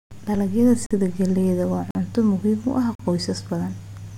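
At 0.86–0.91, 1.91–1.95 and 2.95–2.99 s, a gap between chunks leaves 44 ms holes in the speech about every second, appearing as flat-line waveform breaks and vertical blank spectrogram stripes.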